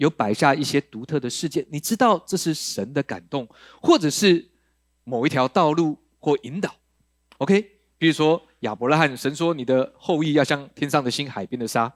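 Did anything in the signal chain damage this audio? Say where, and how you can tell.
No, nothing along the chain from capture to playback has left an audible mark on this speech, and the signal holds steady without any break, distortion or added disturbance.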